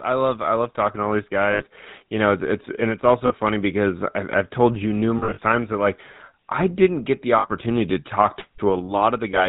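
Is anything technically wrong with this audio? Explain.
Yes. The speech has two related faults.

Throughout, the GSM full-rate codec gives the voice a plainly buzzy, gravelly roughness, consistent with 13 kbps coding. It models the vocal tract and drives it with sparse, regularly spaced pulses. On a spectrogram, nothing appears above 4 kHz, and the harmonics look smeared.

Lost GSM frames occur at 1.52–1.64 s, 3.26–3.33 s, 5.18–5.39 s and 7.38–7.47 s. The decoder repeats the last good frame, which produces a brief metallic ring. The 5.18 s stretch is scattered over about 200 ms, with the longest dropout roughly 40 ms. In the waveform, the envelopes flatten, and the gap lengths fit 20 ms frames.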